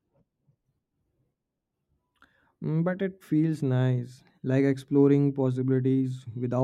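Listening through the speech recording, nothing stood out as a technical fault at any point.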